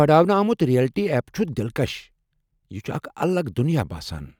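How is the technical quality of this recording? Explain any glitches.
No glitches or faults audible.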